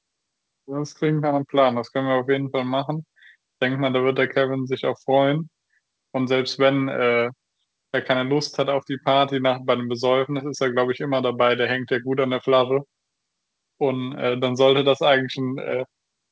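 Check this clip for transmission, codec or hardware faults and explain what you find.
No faults found: the speech has passed through a call path whose band limit at 8 kHz fits a wideband codec such as G.722 at 64 kbps, and nothing else in the transmission, coding or hardware chain stands out.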